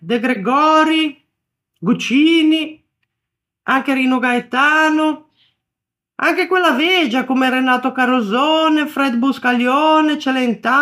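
At 0.33 to 0.36 s, lasting about 32 ms, a corrupt frame decoded produces a brief glitch. Flipped bits in the compressed data gave the decoder wrong gains or misread codes, and it played the damaged audio anyway, across what sounds like two consecutive frames. On a spectrogram this shows as a short block of misplaced energy with sharp vertical edges; the waveform shows an abrupt, out-of-character change.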